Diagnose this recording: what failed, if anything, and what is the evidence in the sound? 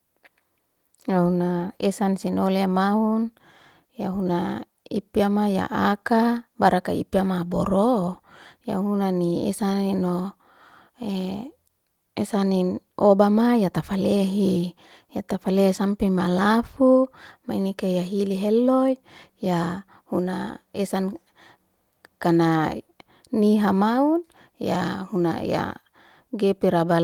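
Nothing stood out on listening to this speech recording, so there is no failed stage to diagnose.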